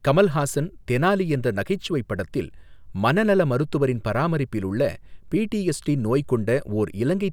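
Speech recording with no audible technical faults anywhere.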